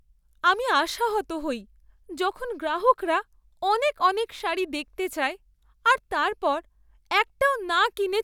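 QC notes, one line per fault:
No audible faults detected.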